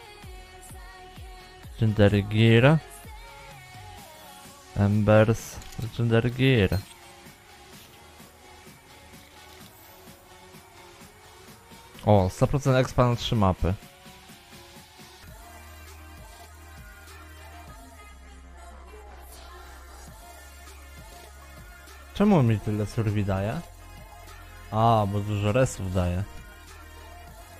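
No technical faults are audible anywhere in the audio.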